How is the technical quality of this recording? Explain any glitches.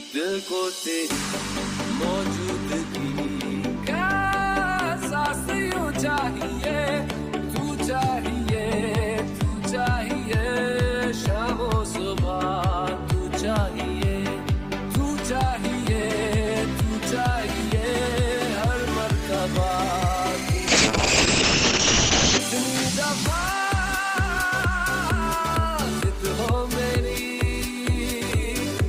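One glitch stands out: a call bitrate drop from 20.68 to 22.45 s. For about 1.7 s the sound turns coarse and muffled. The top end is cut off above about 8 kHz, down from a full 20 kHz. The encoder was starved of bits after the call's bandwidth estimate fell. The roughness fits a fall from around 32 kbps to near 6 kbps. With so few bits, detail is coded crudely and the highs are dropped. Quality returns once the bitrate recovers.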